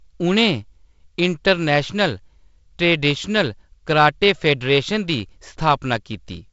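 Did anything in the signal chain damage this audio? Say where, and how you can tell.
No, nothing in the signal chain damaged this audio.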